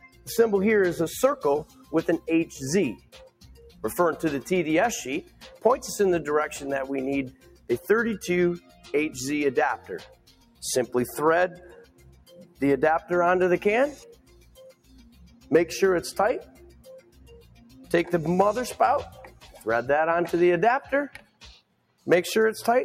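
Throughout, a noise suppressor applied to music or sounds stays active. It treats steady material as noise, so the level swings by around 10 dB.

Sound cut by the noise suppressor occurs at 0.0 to 0.28 s, 1.64 to 3.84 s, 5.23 to 5.64 s, 7.3 to 10.63 s, 11.55 to 15.51 s, 16.43 to 17.91 s, 19.1 to 19.66 s, and 20.84 to 22.07 s. In each span, parts of the sound sink by about 11 to 17 dB. The deepest drops are near 2 to 4 s, 7 to 11 s and 21 to 22 s.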